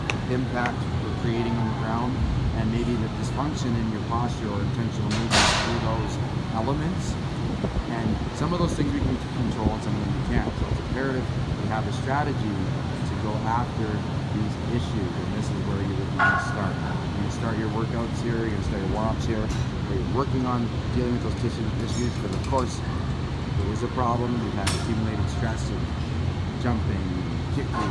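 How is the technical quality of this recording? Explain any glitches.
Nothing here needs explaining, as there are no glitches to point to anywhere in this recording.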